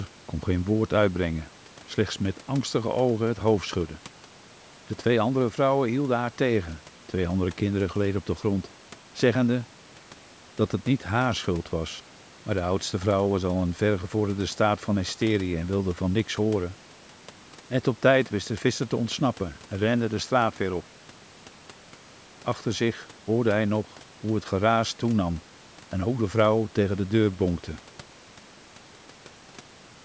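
No technical faults are audible.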